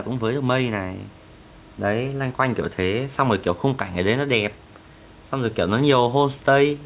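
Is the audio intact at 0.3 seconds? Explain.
Yes, the audio at 0.3 s is intact, with nothing there beyond the narrowband sound of the G.711 call path and the quiet room noise.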